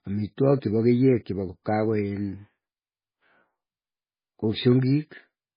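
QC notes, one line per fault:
Throughout, MP3 compression: speech is dull with nothing above 5 kHz, watery and swirly, sibilants chirp. Likely heavy compression near 16 kbps.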